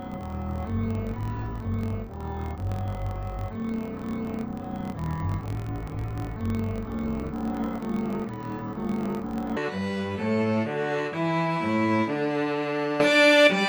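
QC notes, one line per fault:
0.00–9.58 s, interleaved audio read as planar: the sound drops an octave (about 12 semitones down), turns doubled and choppy, with a rough flutter at about 43.1 Hz, yet keeps its normal pace. Each 23.22 ms block, which fits a 1024-sample size, holds alternating left and right samples, but the first half is taken as left and the second as right. Each half then plays at half speed across the whole block, halving pitch, and the seams recur at the block rate.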